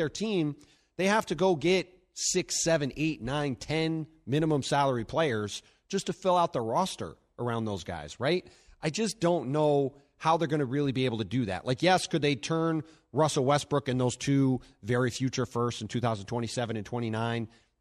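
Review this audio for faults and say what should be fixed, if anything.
Nothing here needs fixing, so you can leave the recording as it is.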